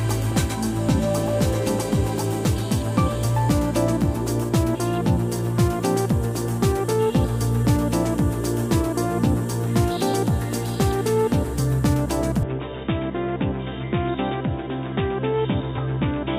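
At 12.43 s the input likely switched to a poorer device: the sound is suddenly cut off above 3.8 kHz, drops about 5 dB and gains faint new background noise.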